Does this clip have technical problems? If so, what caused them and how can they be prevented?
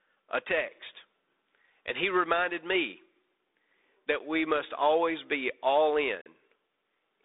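Yes. There are two blocks of digital silence in this speech: a short one at 4.19 s lasting about 11.6 ms, heard as a tick, and a longer one from 6.21 to 6.26 s, about 44 ms, heard as a brief hole. The signal drops straight to zero and returns with no fade. The first gap's length fits a 512-sample buffer, which points to the program failing to refill its output buffer in time. The telephone-band sound of the 32 kbit/s G.726 link surrounds both gaps. To prevent this, give the audio thread a higher priority and enough buffer headroom that it never underruns.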